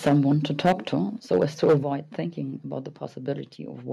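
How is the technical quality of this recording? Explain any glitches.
The recording has two recurring glitches: harsh distortion on loud passages and sudden drops in level.

Microphone overload occurs at 0.06 to 0.33 s, 0.64 to 0.73 s and 1.31 to 1.76 s, with peaks pushing about 11, 11 and 8 dB past the converter's limit. The likely cause is an input volume set too high, so the converter flattens the tops of the loudest syllables. That gives them a crackly, gritty edge, worst in the second burst, where a large share of samples is cut. On a waveform the peaks appear squared off. A spectrogram shows smeared vertical streaks of added high-frequency energy.

The microphone volume is stepped down at 0.09 s by about 4 dB and at 1.83 s by about 8 dB. Both the speech and the background fall abruptly in loudness, and each drop comes during or just after a distorted stretch. This points to software that likely detected clipping and cut the device's input gain in one step. 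A waveform shows the envelope dropping like a stair, and a spectrogram dims uniformly across all frequencies at that moment.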